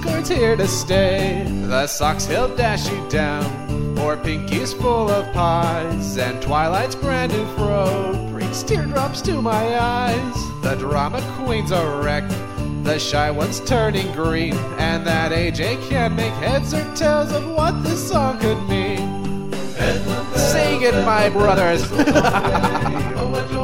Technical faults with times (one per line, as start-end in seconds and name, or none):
21.26-23.63 time-stretched section